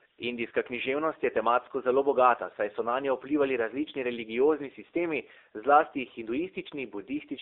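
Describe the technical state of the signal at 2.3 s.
At 2.3 s the speech is still passing through the AMR narrowband mobile codec, as it does for the whole clip. The signal was reduced to telephone bandwidth and rebuilt from a vocal-tract model excited by a few pulses per 5 ms subframe, at a low rate that points to the 7.4 kbps mode. The audible band runs only from 300 Hz to 3.7 kHz, so the voice sounds thin and muffled, with a plainly buzzy, synthetic edge.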